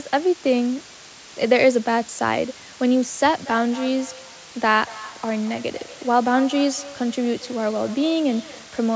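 Low bit depth with dither runs through the whole of this speech recording, heard as a steady, even hiss sitting roughly 20 dB below the speech with no grit or distortion on the voice. That level fits a signal rounded to 6 bits, with random dither added first so the rounding error spreads out into flat white noise instead of clinging to the speech as harsh distortion. Feedback echo between two devices starts at 3.33 s and lasts to the end. Each phrase returns at a fixed gap of roughly a fifth of a second, with repeats reaching about 18 dB below the speech and growing thinner and more ringing each time round. That pattern comes from a second device in the same room replaying the call into the first microphone, where neither device's echo canceller can remove sound played by the other. The call's microphone processing limits the band to nothing above 8 kHz.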